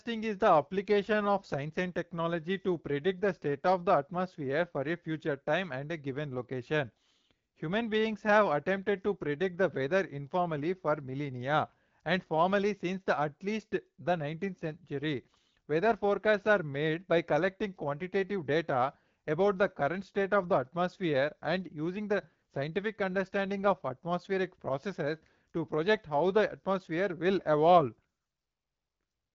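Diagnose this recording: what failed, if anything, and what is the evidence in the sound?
Nothing has failed here; the speech is carried over an AMR wideband (HD Voice) link at a rate that sounds like 12.65 kbit/s, and the light codec texture you can hear is simply how that path normally sounds.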